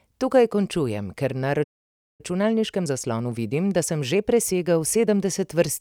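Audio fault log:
1.63–2.21 s, playback stall: the player most likely ran short of buffered data or had its output thread blocked, so nothing reached the output. The speech cuts off mid-flow into about 0.55 s of silence, then resumes.
2.21–5.21 s, time-compressed catch-up: to clear the backlog built up during the stall, the player drops small slices of audio and cross-fades the joins, playing about 1.1 times faster for 3 s. The speech sounds hurried at unchanged pitch.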